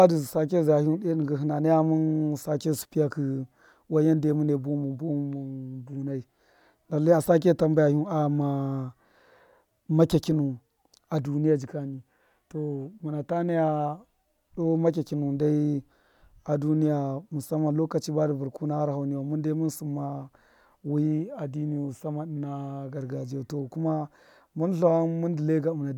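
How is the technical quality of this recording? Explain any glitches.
Nothing in the recording stands out as a glitch; it just runs along steadily without any technical hiccups to point to.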